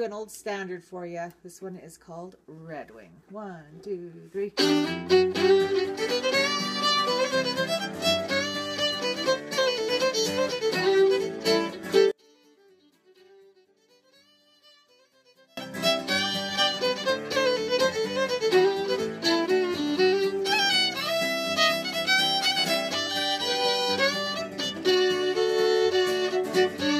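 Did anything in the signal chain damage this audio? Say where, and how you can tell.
Yes. From 12.11 s to 15.57 s the sound drops by about 34 dB in the mono sum and turns faint, then returns at full level. That collapse points to one channel inverted, likely from a polarity reversal in the analogue wiring, such as swapped conductors on one balanced lead. With one side flipped, the content shared by both channels cancels on summing, and only the small left-right difference survives.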